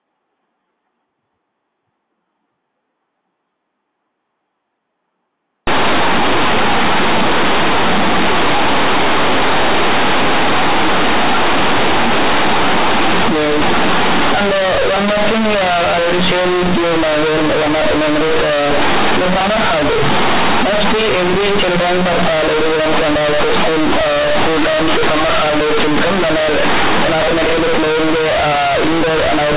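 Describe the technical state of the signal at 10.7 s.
At 10.7 s the speech is affected by companded audio read as linear, running from 5.67 s to the end at 29.57 s. The mu-law telephone bytes are played as plain 8-bit linear samples without expansion, so every sign change swings the output across roughly half its range and quiet passages come out as loud as peaks. It sounds like harsh, buzzy, very loud distortion with heavy noise filling the pauses. The waveform looks like a thick block with little level contrast. On a spectrogram, broadband smearing fills the band up to the 4 kHz telephone limit, including in the gaps.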